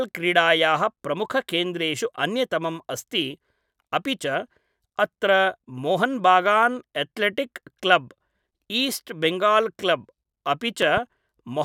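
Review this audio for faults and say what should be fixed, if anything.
A loud pop, two sharp thumps between 10.82 and 11.00 s, rises a little above the speech, which carries on underneath rather than cutting out as in a dropout. A voltage pulse, likely from a plug, switch or static discharge, was added to the signal. Seat connectors firmly and ground the equipment before recording.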